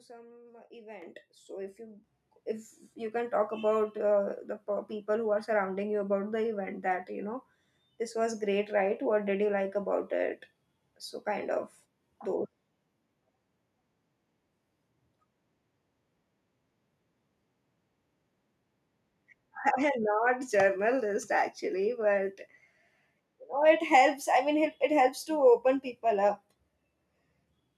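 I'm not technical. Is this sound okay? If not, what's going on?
No. Microphone volume stepped up at 1.02 s and again at 2.04 s: the whole sound, both the speaker and the background behind them, suddenly gets louder in one jump each time, rather than rising smoothly. The call software decided the microphone was picking up too little and turned its input volume up in a single step. The second jump is smaller than the first, and after both the recording stays at that higher level.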